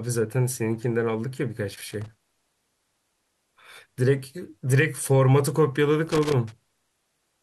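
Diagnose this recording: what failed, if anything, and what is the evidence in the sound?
Loose connector crackle in the analogue wiring. Irregular scratchy bursts chop the speech from 1.75 to 2.34 s and 6.07 to 6.52 s. A worn contact is intermittently breaking the signal.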